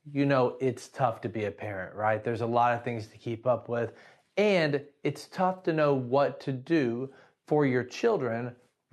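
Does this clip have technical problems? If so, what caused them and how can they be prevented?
No, there's nothing wrong to hear here; the speech has simply come over a call connection, where the codec tops the sound out at around 12 kHz, just as an Opus call link normally would.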